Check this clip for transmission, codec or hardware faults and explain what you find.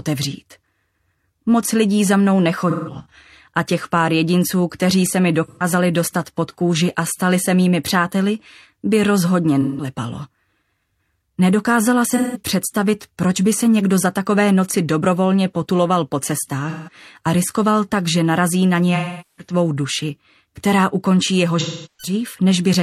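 The clip has a transmission fault: AAC frame loss with concealment, at seven points: 2.70–3.14 s, 5.45–5.64 s, 9.61–9.88 s, 12.10–12.40 s, 16.69–16.93 s, 18.95–19.53 s and 21.59–22.13 s. Frames went missing in transit, and the decoder patched each gap by re-synthesising from the last good spectrum. That produces smeared, phasey, noisy stretches, from about 128 ms to about 430 ms. The first is broken up, with the longest run about 150 ms. On a spectrogram the patches show as blurred, frozen-looking blocks that lose fine harmonic detail. In the waveform they look like smoothed, flattened envelopes that ease down toward quiet.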